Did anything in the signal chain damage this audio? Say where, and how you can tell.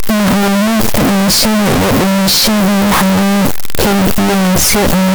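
Yes. The damage sits at the sample-format conversion stage and runs through the whole speech clip: a signed and unsigned mix-up on 8-bit samples, likely caused by reading signed samples as unsigned or the reverse. Soft sounds come out as loud as the strong parts of the speech, with a very loud, harsh distortion. On a waveform, every zero crossing becomes a jump across the whole range. A spectrogram shows dense broadband energy from top to bottom.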